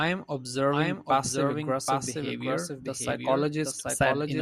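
A doubled audio track runs through the whole of this speech clip: a second, full-band copy of the same speech trails the original by roughly 0.7 s, sitting about 5 dB lower. Because the copy carries no decay or room colouring, it sounds like a detached repeat rather than an echo. The likely cause is the signal being captured a second time over a slower path, or an edit that left two copies stacked out of alignment.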